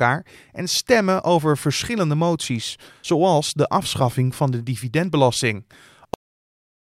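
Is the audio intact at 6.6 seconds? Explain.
No. A cut-off end begins at 6.14 s and runs to the close of the file at 6.89 s, so 6.6 s falls inside it. The speech stops abruptly right after "afschaffing van de dividendbelasting". The final stretch of audio was never written out or played, so the sound is severed mid-stream instead of fading. It drops straight into digital silence with no natural decay, and nothing is heard at 6.6 s.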